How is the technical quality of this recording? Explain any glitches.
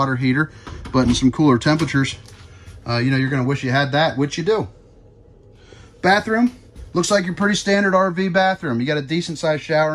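The technical quality of this recording is good, with no glitches to explain.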